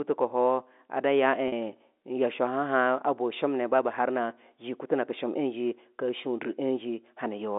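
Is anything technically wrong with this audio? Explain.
Yes. From 1.48 to 1.52 s there is packet loss with pitch repetition. About 40 ms of audio went missing, which fits two lost packets. The receiver filled the gap by looping the last pitch period, so the sound briefly holds with a buzzy, frozen quality. On a waveform this appears as identical repeated cycles, and on a spectrogram as flat, unchanging harmonics within the 250 Hz to 3.6 kHz telephone band.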